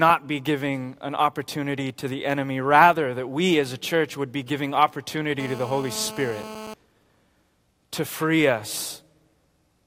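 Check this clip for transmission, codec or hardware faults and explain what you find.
One hardware fault is present: GSM phone buzz. From 5.40 to 6.74 s a hard, raspy buzz sits under the speech, about 14 dB below it. A nearby 2G phone on a call transmits in bursts 217 times a second. The audio circuit rectifies those radio pulses into a steady 217 Hz tone with many harmonics.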